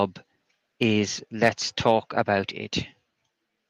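Speech with two kinds of fault. At 1.41 s and again at 2.43 s there is a microphone volume step-down. Voice and background both fall abruptly, by about 1 dB and then about 2 dB. This is likely the call software lowering the input gain. The drops are clean level shifts that persist, with no added distortion.

Microphone overload is heard at 1.44–1.49 s, about 4 dB over, and at 1.87–1.92 s, about 1 dB over. Peak tops are flattened, leaving a brief harsh crackle on loud syllables, likely from the input volume set too high. Unlike the step-downs, the overall level stays unchanged.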